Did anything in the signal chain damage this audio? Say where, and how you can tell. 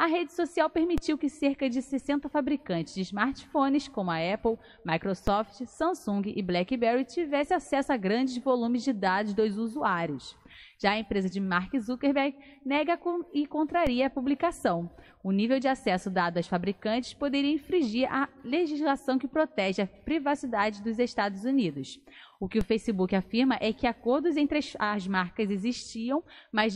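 Yes. DC steps at 0.98, 5.27, 13.87 and 22.61 s, each heard as a low thump while the sound carries on. At the converter or analogue input, the zero line jumps by about -17 to -18 dBFS, then decays as a 20 Hz high-pass bleeds the offset away.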